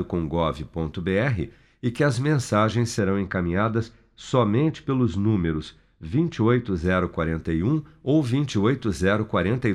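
Right after "e que as mensagens", at 2.99 s, the speech turns dull and muffled until 6.84 s. That's de-emphasis applied wrongly: a treble cut meant to undo pre-emphasis, applied where there was none or applied twice, sloping smoothly down to about 14 dB lower at 10 kHz than at 1 kHz.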